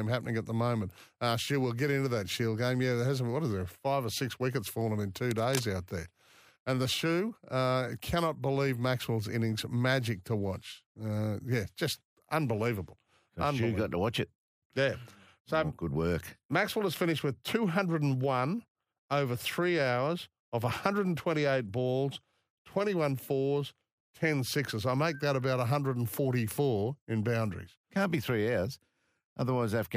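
At 5.31 s a burst of cable scratch noise begins and runs to 5.64 s, roughly a third of a second. It sits over the speech as a dense, irregular scratching and crackling, fairly prominent at around 10 dB below the speech level. The likely cause is a worn cable, plug or control being moved, so that its contact resistance jumps about rapidly and injects uneven noise into the signal path for as long as the movement lasts.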